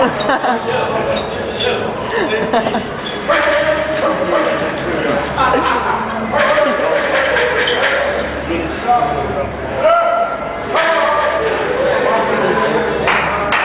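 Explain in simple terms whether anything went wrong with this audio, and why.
Nothing went wrong; no technical faults can be heard anywhere.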